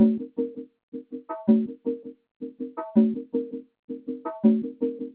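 A noise suppressor meant for speech has been applied to music or sounds across the whole clip. It treats sustained and ambient content as noise, so the level swings by around 15 dB, with held sound and decays sinking while onsets pass, giving an audible pumping and thinning. Two stretches are sound cut by the noise suppressor more heavily: 0.59 to 1.3 s and 1.72 to 2.6 s, each dropping by about 20 dB at its deepest and attenuated for roughly half a second in total. Content there is pulled down as if it were noise, with tails cut short. The bandwidth stops at 4 kHz, consistent with a G.711 mu-law call path at 64 kbps.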